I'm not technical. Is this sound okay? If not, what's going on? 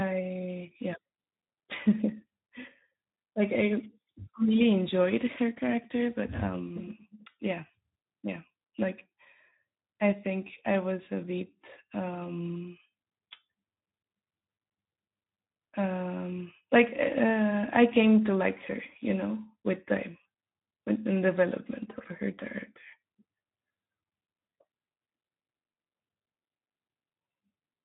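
No, it isn't. Throughout the whole clip the speech carries Speex codec damage: this older internet-calling format squeezes the voice into very little data, so it sounds noisy and hoarse, and everything above about 3.8 kHz is gone, leaving it dull and phone-like.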